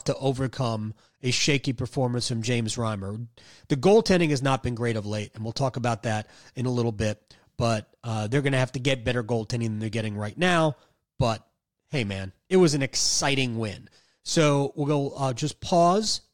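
Speech recording with no audible technical faults.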